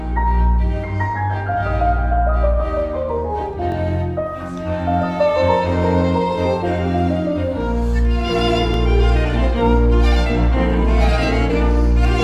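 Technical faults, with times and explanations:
3.72–3.74 s and 8.74–8.76 s, overlapping chunks: each 5-second chunk begins about 21 ms early, so that stretch of sound plays twice and produces a brief stutter at each join.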